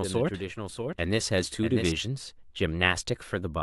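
From the very start of the speech until 1.92 s, a doubled audio track runs underneath: a second full-band copy trails the original by roughly 0.7 s, a few decibels quieter, likely from the signal being picked up again through a slower path. Unlike an echo or reverb, it is a single clean repeat with no decay tail or room colouring, and at 1.92 s it cuts off abruptly rather than fading.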